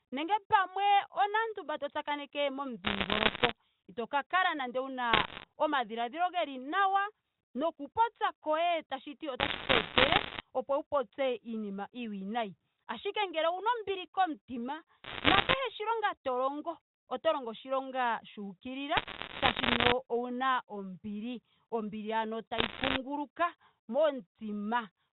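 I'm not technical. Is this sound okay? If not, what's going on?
No. Bit errors on a digital phone line cause bursts of crackle at 2.84–3.51, 5.13–5.44, 9.4–10.4, 15.04–15.54, 18.96–19.92 and 22.58–22.98 seconds. Corrupted bits spoil single sound samples, and the worst-hit samples make sharp ticks over the speech.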